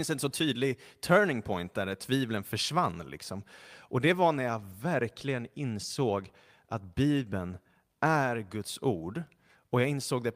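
At 4.71 to 4.73 s, between "det var när jag" and "verkligen insåg att", a lost packet rebuilt from error correction: a 20 ms stretch sounds briefly rougher and noisier, with no gap, which fits a single lost packet replaced by the low-bitrate redundant copy carried in the next one.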